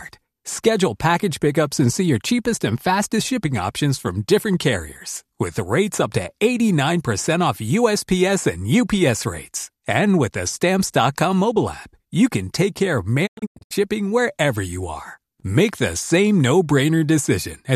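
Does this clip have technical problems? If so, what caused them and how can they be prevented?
Yes. Between 13.25 and 13.73 s the speech breaks into several short silent holes, each fading out in about 20 ms, with 312 ms missing in total and the longest gap 96 ms. This is a digital broadcast dropout: the receiver muted while frames arrived corrupted or missing, so that stretch of audio is gone. A stronger, steadier signal through better antenna placement, plus more robust error protection in the transmission, would prevent it.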